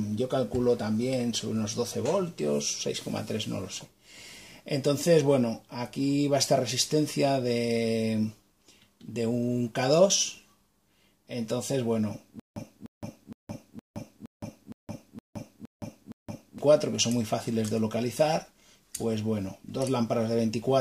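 From 12.40 to 16.58 s, a stutter with silent gaps: a 0.30 s fragment repeats nine times with 0.17 s of silence between, likely a stalled stream.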